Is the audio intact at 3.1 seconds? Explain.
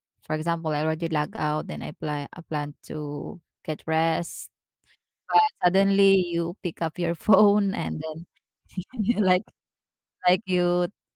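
Yes, the audio is intact at 3.1 seconds, with no dropout, click, distortion or other fault audible at that moment.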